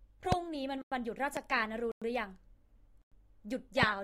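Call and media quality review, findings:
Loud pop at 0.32 s, about 24 ms long, peaking well above the speech, roughly 20 dB. Second loud pop at 1.37 s, also about 24 ms, somewhat softer, around 15 dB over signal. Each is a single sharp thump with no double hit. Speech continues underneath both. Mechanism: a voltage step or spike added to the signal, then shaped by downstream circuitry. Likely cause is a plug, switch, static discharge or driver glitch in the capture chain.

Gap between chunks at 0.82–0.92 s, 1.92–2.02 s and 3.02–3.12 s. Each is a 100 ms hole. Holes recur every 1.1 s, which points to audio delivered in one-second blocks. Material around the holes is intact. Nothing appears to be dropped, but playback is interrupted at every join. Mechanism: silence inserted between consecutive chunks, from codec padding or a player starting each block late. Check the chunk assembly and jitter-buffer scheduling.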